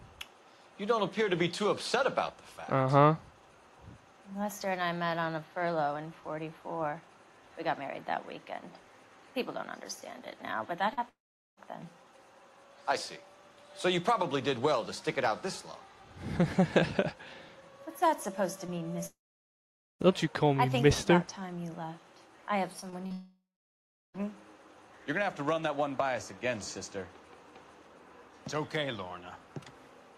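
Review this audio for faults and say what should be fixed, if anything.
Short concealed packet loss: brief smears or wobbles at 10.93–10.99, 18.67–18.70, 22.80–22.85, 22.90–22.94 and 23.06–23.12 s. Each time, 20 to 40 ms of the stream arrived too late. The receiver extended the preceding sound, voiced from its pitch and unvoiced as shaped noise, and then blended back into the real signal. A larger jitter buffer and forward error correction would prevent these.

Long network dropout: the sound turns into a fading buzz or hiss and then goes silent at 11.09–11.59 s, 19.06–20.02 s and 23.12–24.16 s. The silent stretches last about 0.42, 0.85 and 0.72 s. The missing spans total roughly 0.48, 0.94 and 1.02 s, and the audio resumes without those parts. The likely cause is a network outage in which no packets arrived. A more stable connection, with wired or prioritised traffic, would prevent these.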